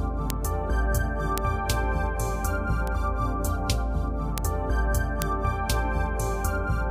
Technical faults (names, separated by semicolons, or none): bit error spike